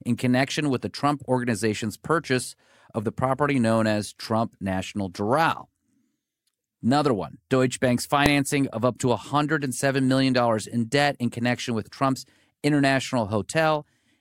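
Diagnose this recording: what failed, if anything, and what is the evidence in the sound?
At 8.26 s, just before "of up to", a single sharp bang cuts through the speech: invalid numbers at full scale. A calculation produced infinite or invalid values, which the sample-format conversion pinned to the maximum level for about 0.73 ms, which fits a 32-sample block. Unlike a dropout, which goes silent, this is a very loud bang.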